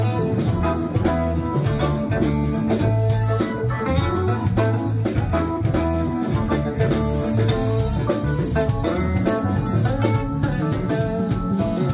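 No faults can be heard anywhere in this clip.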